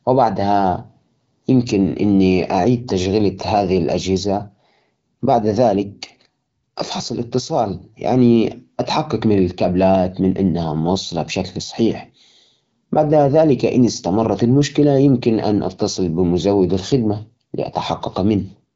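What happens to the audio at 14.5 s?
Nothing goes wrong at 14.5 s: the speech carries on intact through that moment, with only the light coloring of the AMR wideband (HD Voice) codec running at 12.65 kbit/s.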